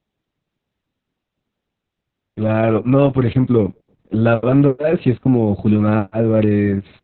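Muffled, hoarse and faintly robotic from start to finish, with nothing above 4.2 kHz: heavy Opus voice compression in narrowband SILK mode, consistent with a very low bitrate around 6 kbps.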